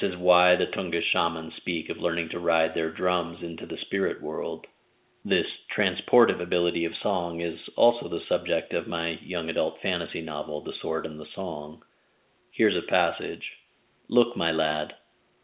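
No technical faults are audible.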